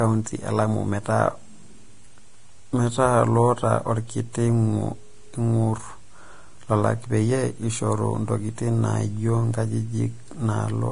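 Speech runs throughout with heavy lossy-codec damage, likely from Vorbis compression. Nothing survives above about 10.6 kHz, and the treble just below that cut-off has turned into grainy hiss where fine detail was quantised into noise of similar energy, roughening tones and softening consonant attacks. The density of the damage fits a bitrate near 31 kbps. A plain low-pass filter would leave the remaining treble clean rather than noisy.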